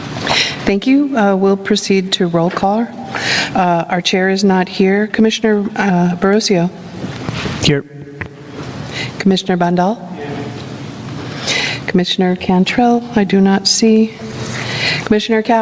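Gain pumping runs through the whole clip: the gain ducks under each loud sound, a swing of around 25 dB, so loud and soft parts sit squashed close together, likely from input gain set far too high with a fast limiter clamping it. The call path's band stops at 8 kHz, which fits G.722 at 64 kbps.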